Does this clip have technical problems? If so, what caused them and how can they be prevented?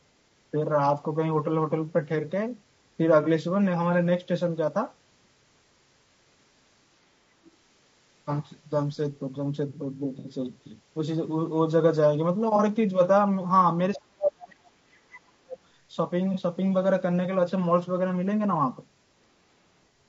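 Yes. The whole clip is speech carried through low-delay AAC compression, likely AAC-ELD running at a low rate; the damage is plainly audible and fits a bitrate around 32 kbps. This codec works in very short frames, which resolve pitch harmonics poorly and leave too few bits for fine detail. As a result the voice sounds rough and grainy throughout, with noise filling the gaps between harmonics and a top band that sounds thin or synthetic. Giving the call a higher bitrate, or a codec mode with longer frames where delay allows, would prevent this.

AAC frame loss with concealment occurs four times: 3.23 to 3.27 s, 10.19 to 10.27 s, 12.56 to 12.61 s, and 16.34 to 16.39 s. Each time, audio went missing in transit, and the decoder patched the gap by reusing and scrambling the last good spectrum. The short patches, about 30 ms each, fit one lost frame and sound like brief smeared or phasey blurs. 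The 60 ms gap at 10.19 s fits two frames and smears longer. A more reliable network path, or redundancy and forward error correction, would prevent these dropouts.

The other side's voice leaks through briefly from 7.44 to 7.51 s. The talker's device was likely playing the far end on a loudspeaker, and the echo canceller failed to strip all of it from the microphone signal. The residue is very faint, roughly 30 dB below the talker. Using a headset, or a better-tuned echo canceller with a stronger residual-echo stage, would prevent this.

Speech is suppressed in double talk from 13.96 to 15.59 s, most likely because both sides spoke at once. The echo canceller could not tell its own talker from the loudspeaker echo and clamped down on everything. For about one and a half seconds the voice dips, dropping by as much as roughly 35 dB at the deepest point. An echo canceller with proper double-talk detection, or a headset that removes the echo path, would prevent this.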